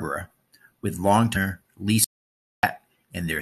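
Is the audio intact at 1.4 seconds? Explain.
No. Damaged data in the compressed stream hits at about 1.35 s, a brief fault lasting under 20 ms. A short run of the encoded speech data there is corrupted, so the decoder misreads those frames, loses its place in the stream and has to hunt for the next valid frame header before normal decoding resumes. The result is a quick chirp or squawk-like blip that cuts across the speech for that instant.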